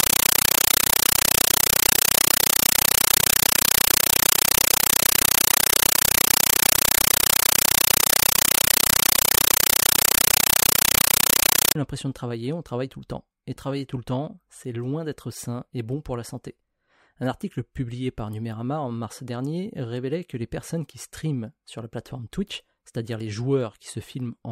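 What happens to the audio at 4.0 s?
At 4.0 s the clip is inside a stretch of compressed stream played as audio, running from 0.0 to 11.75 s, where the speech resumes with "l'impression de travailler on". The encoded bitstream, which fits a 384 kbps AC-3 stream, reaches the output undecoded and is treated as sample values. Each frame becomes an 8 ms burst of noise followed by silent padding, repeating at 31.25 Hz, so the speech is replaced by very loud, chattering static.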